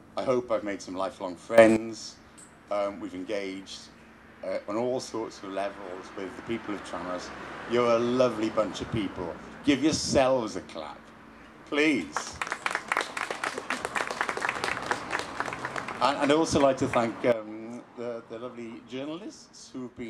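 The level does two abrupt steps here, both sudden gain jumps. At 1.58 s everything, background noise included, leaps up by about 13 dB and stays there until 1.77 s. Then at 17.32 s it all drops by about 12 dB and stays down through to the end. Sound and noise move together with no fade either way, which likely means a digital gain change applied instantly between samples rather than ramped in.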